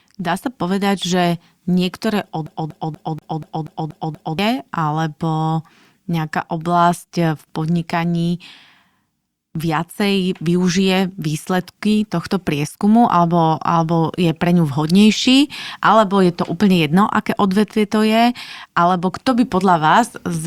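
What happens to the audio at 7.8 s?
Nothing goes wrong at 7.8 s; the speech plays through that moment intact, with no dropout, click or distortion.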